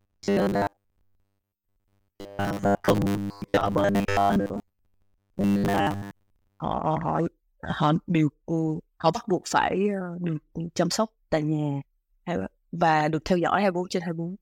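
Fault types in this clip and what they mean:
Robotic sound from repeated short buffers: From the start to 6.6 s, speech becomes a rigid metallic buzz at 100 Hz. Most audio is likely replaced by repeated 10 ms buffers.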